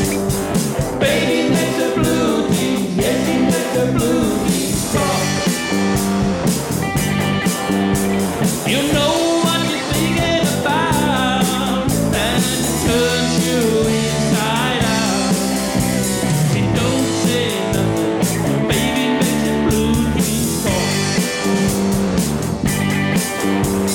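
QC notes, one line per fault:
16.63 s and 17.77 s, block of digital silence: two tiny dropouts where the signal goes straight to zero and back with no fade. The first lasts about 1.45 ms, which fits a 64-sample block, and the second about 4.35 ms. At these lengths they come across as ticks rather than audible holes. The likely cause is the output buffer not being filled in time, leaving zeros in its place.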